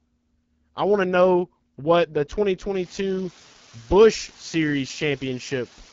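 It's a speech clip run through the AMR wideband (HD Voice) codec, and the damage is easy to hear. The rough, raspy texture fits the 8.85 kbit/s mode, one of its two lowest rates. Nothing comes through above about 7.4 kHz. From 2.75 s to the end there's a steady, even hiss sitting only about 20 dB under the speech. That's low bit depth with dither: the signal gets requantised to something like 7 bits, and the dither turns the rounding error into flat white noise instead of distortion.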